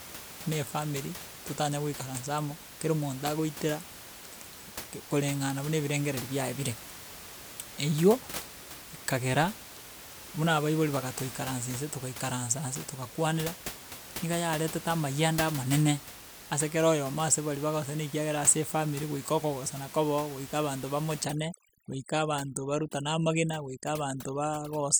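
Speech, with room noise sitting about 14 dB below the voice, until overdone noise removal sets in at 21.25 s, just after "kobe oo goika abanto", and lasts to the end. Bands near the noise estimate are pushed nearly to silence, leaving twinkling specks in the background and a voice with its quieter detail stripped away.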